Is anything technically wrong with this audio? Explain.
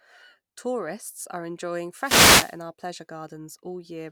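Yes. There is one fault in this speech clip. From about 1.95 s to 2.59 s, just after "are enjoying" and before "our pleasure", there is a wireless microphone noise hit. The radio link from an analogue FM microphone fades as reflected signals cancel each other at the receiver. Receiver noise then rises. It is heard as a burst of static lasting about 0.64 s.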